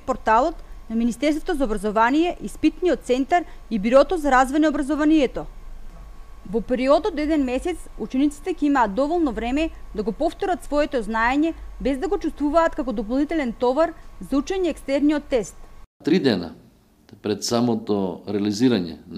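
No technical faults are audible.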